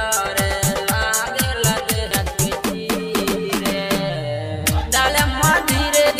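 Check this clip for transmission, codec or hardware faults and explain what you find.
One hardware fault is present, a CD skip at 2.11 s. A knock or a flaw on the disc made the laser jump onto a different turn of the disc's spiral, so playback mutes for a few milliseconds and resumes elsewhere, heard as a short tick followed by an abrupt jump in the sound.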